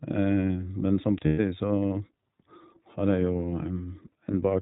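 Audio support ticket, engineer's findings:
iLBC codec, whole clip: narrowband speech with nothing above 4 kHz. It sounds plainly rough and a bit synthetic, and each frame's excitation is coded on its own. The character fits iLBC's 15.2 kbps mode with 20 ms frames.

Lost iLBC frames, 1.26–1.40 s and 4.32–4.35 s: packet drops fill in as a held, slightly buzzy vowel because the decoder repeats the last pitch cycle mixed with noise. The first gap is 120 ms, which fits six 20 ms frames, and the second fits a single frame. The voice snaps back right after each one.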